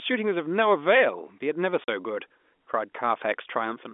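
This is a speech clip carried over a G.711 telephone line. The sound is band-limited to roughly 250 Hz to 3.5 kHz. At 1.84 s the speech drops out to complete silence until 1.88 s. That is a 40 ms hole. Its length fits two lost 20 ms packets. This is packet loss filled with silence. The receiver had nothing to play and inserted silence. The sound stops and restarts abruptly.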